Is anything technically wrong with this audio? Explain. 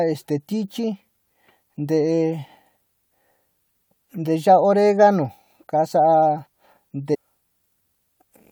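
Yes, there's one problem, near the end of the speech at about 7.13 to 7.15 s: a stream segment skipped. The audio jumps forward abruptly, cutting into the speech with a small blip at the join. That's likely a segment of the stream that failed to load, with the player carrying on from the next one. So you don't hear a gap; whatever that chunk held is simply gone.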